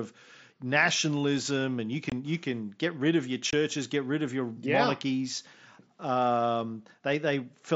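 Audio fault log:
2.10–2.12 s and 3.51–3.53 s, unconcealed Bluetooth headset packet loss: the speech drops out twice for about 22.5 ms each, with abrupt edges. That length fits three 7.5 ms mSBC frames lost on the wireless link between headset and phone and replaced by silence or an idle pattern. Because nothing was reconstructed, these are hard gaps rather than the smeared, repeated or faded fill of a concealed loss. The wideband mSBC audio around them carries light codec graininess.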